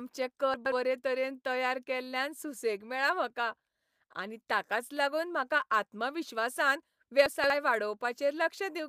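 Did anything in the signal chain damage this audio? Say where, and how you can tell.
Yes, chunks out of order, at the buffer or jitter-buffer stage. From 0.54 to 0.72 s a 60 ms block plays two blocks late, and from 7.26 to 7.5 s another plays three blocks late. Each moment sounds briefly jumbled, with hard joins where misplaced blocks meet. Unlike a dropout, nothing is missing and no silence appears. The material is all present, just played in the wrong order.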